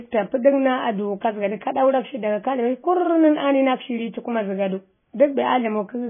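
Speech showing heavy MP3 compression throughout: nothing above 3.5 kHz, plus watery swirling that a plain low-pass filter wouldn't cause, likely from a very low bitrate around 16 kbps.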